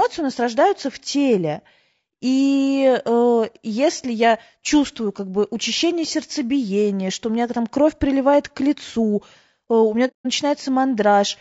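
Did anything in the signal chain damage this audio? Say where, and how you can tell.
Yes. Throughout the clip the speech sounds rough and grainy, with a noisy haze between the harmonics and a thin, synthetic-sounding top band. This points to the codec stage, likely low-delay AAC compression (AAC-ELD) at a low bitrate, around 32 kbps. Its short transform frames resolve pitch harmonics poorly and leave too few bits for them. The result is steady graininess across the whole voice.

From 10.07 to 10.27 s there is a soft-edged hole of about 180 ms, which fits roughly six lost codec frames. This is AAC frame loss with muting. The decoder zeroed the missing frames, and its overlapping windows fade the sound out and back in over about a frame. That gentle fade separates it from a buffer underrun or a sample dropout, which cut in and out abruptly.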